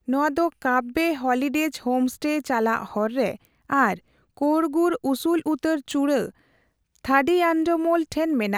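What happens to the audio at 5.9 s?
At 5.9 s the speech carries word clock ticks, part of a series running from 0.14 to 8.22 s. An unlocked receiver clock slips about once a second, dropping or repeating a sample, causing sharp periodic ticks.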